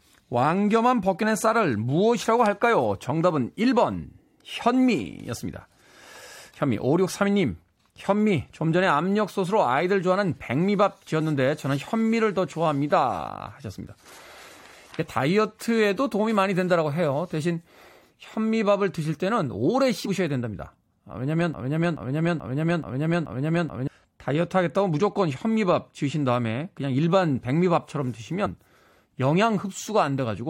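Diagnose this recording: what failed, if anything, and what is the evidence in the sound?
At the codec stage, compressed frames were skipped: missing or rejected frames make the speech jump ahead by about 50 ms, heard as brief skips at 20.04–20.08 s and 28.45 s.

At playback, a broken-record loop: a 0.43 s fragment repeats five times back to back from 21.54 to 23.88 s, likely a stalled stream resending its last buffer, so the intervening speech is lost.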